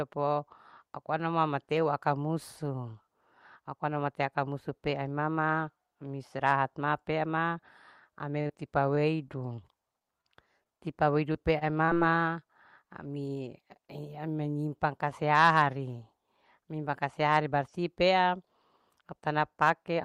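It's a speech recording with two separate problems. From 8.41 to 11.97 s there are scattered short gaps: about fifteen small holes where packets went missing or arrived too late, none longer than roughly 40 ms. The receiver covered each one by stretching out the sound just before it, so you hear little ticks, smears and hiccups rather than dropouts. Around 180 ms of audio was lost and about 24 ms was added in the patching. Then from 15.33 to 15.62 s there's hard clipping. The level runs about 4 dB past what the stage can handle, so the peaks get sliced flat. Those squared-off tops throw harmonics up high, and that's the crackly, gritty edge you hear on the loud parts in that short window.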